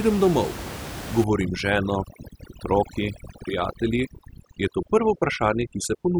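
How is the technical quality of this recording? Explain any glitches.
Overdone noise removal degrades the speech from 1.24 s to the end. The background drops and breaks up into twinkling specks. An over-aggressive noise reduction setting is cutting individual frequency bands whenever they sit close to its noise estimate, taking quiet parts of the voice along with the room noise, which was about 11 dB below the speech.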